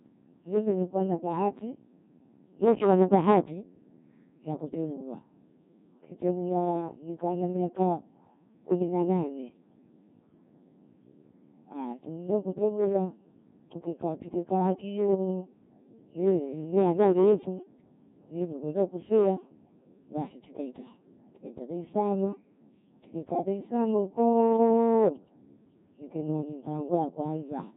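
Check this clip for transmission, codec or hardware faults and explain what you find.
Two faults run through the whole speech recording: hard clipping and the Codec 2 vocoder.

Hard clipping is present throughout. The signal was driven about 10 dB past what a stage could pass, so a small fraction of peaks are cut flat. It sounds like crackle on loud syllables, and unlike codec grit it appears only where the level peaks.

The Codec 2 vocoder is also present throughout, with heavy damage. Only pitch, voicing, energy and an envelope survive, and the decoder rebuilds the speech from sine waves, which fits a low mode around 1.6 kbit/s. It sounds robotic and buzzy with nothing above 3.8 kHz. Unlike ordinary low-bitrate coding, the waveform itself is synthetic.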